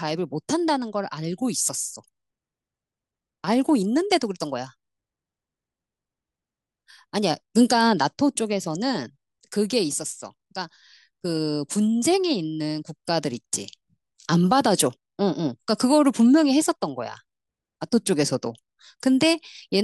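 No technical faults can be heard at any point, and the signal stays continuous and steady across the whole recording.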